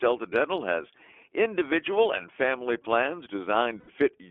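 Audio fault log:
throughout iLBC codec: the speech is clear but slightly rough and synthetic, with a thin telephone quality from a line band of 300 Hz to 3.4 kHz. The damage is plainly audible. Each frame's excitation is coded independently, which fits 20 ms frames at 15.2 kbps.
3.80–3.90 s lost iLBC frames: just after "individual and family plans", about 80 ms turns into a held, faintly buzzy vowel. The decoder repeated the last pitch cycle mixed with noise, which fits four lost 20 ms frames, and the speech recovers almost immediately afterwards.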